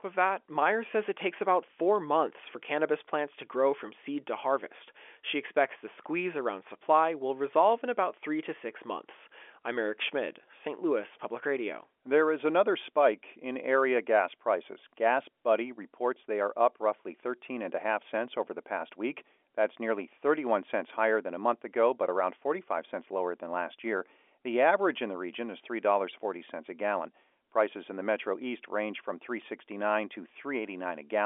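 No technical faults can be heard; the speech carries the narrow band of a fixed-line telephone call, roughly 300 Hz to 3.4 kHz with nothing above about 3.7 kHz, which fits G.711 A-law coding at 64 kbps, and any coding damage is faint at most.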